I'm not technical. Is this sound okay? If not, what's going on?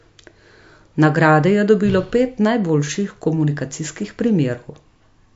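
No. The speech was likely squeezed too hard by MP3 compression throughout, which removes everything above 7.6 kHz and leaves it dull, watery and swirly.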